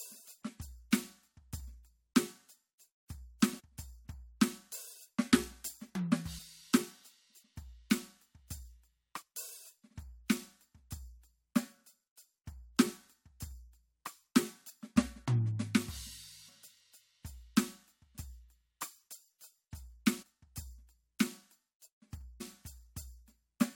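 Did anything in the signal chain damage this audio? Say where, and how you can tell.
Yes. The music lurches forward at 3.59 s, 9.21 s, 20.21 s and 22.40 s, each time with a short smeared blip rather than a sharp click. About 300 ms goes missing at 3.59 s and about 100 ms at each of the others. This is compressed frames skipped at the codec or decoding stage. Whole frames were dropped, and the jumps fit multiples of a 23.2 ms frame. Overlapping neighbouring frames soften each join into that blur.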